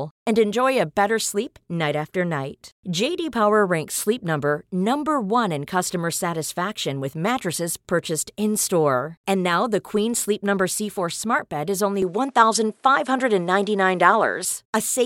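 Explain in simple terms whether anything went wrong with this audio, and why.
From 12.02 s to 14.45 s, right after "smart bed is", the speech suddenly turns duller, loses its top end above about 11.4 kHz, shifts in loudness and gains faint new background noise, with no gap. That's an input switched to a poorer device, likely mid-recording.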